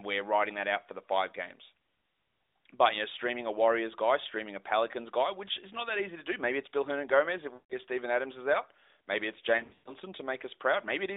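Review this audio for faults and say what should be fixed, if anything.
Lost AMR speech frames at 7.54–7.74 s and 9.58–9.93 s. The decoder repeats the last pitch and vocal-tract settings with falling gain, so the sound smears, fades, then returns rough. Stronger channel coding or a cleaner radio link would prevent the dropped frames.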